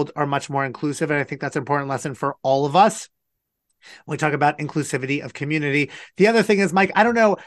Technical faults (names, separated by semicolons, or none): MP2 compression